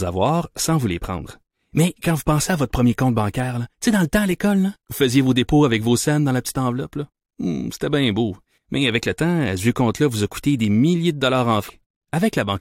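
At 11.68 s the speech jumps ahead with a small blip, likely a stream segment skipped after a failed load: a hard waveform splice and a thin vertical spectrogram line.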